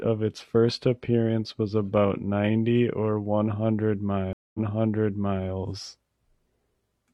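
A speech recording with a stream reconnect between 4.33 and 5.48 s. The audio drops out for about 213 ms, then picks up again 0.94 s earlier than where it stopped, so the stretch just before the gap is heard a second time. This happens because the connection broke, the player went quiet and reconnected, and a new decoder started partway through the stream, with the server resending a short burst of audio it had already delivered.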